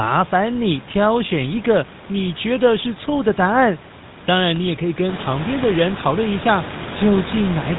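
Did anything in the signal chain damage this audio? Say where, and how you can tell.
Yes, at the codec stage: the whole clip has gone through a GSM full-rate codec, and the damage is plain from start to finish. The speech has that buzzy, gravelly grain and nothing above 4 kHz, which fits the old 13 kbps GSM coder. It models the vocal tract and drives it with a sparse pulse train, so the fine detail of the excitation is simply gone. The room noise that comes up around five seconds, by about 12 dB, belongs to the room and isn't part of this damage.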